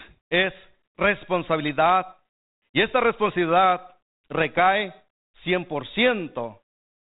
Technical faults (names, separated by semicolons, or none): none